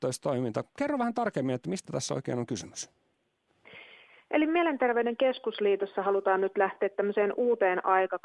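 No technical faults can be heard anywhere in the clip. Nothing in the audio calls for a time, a value or an explanation.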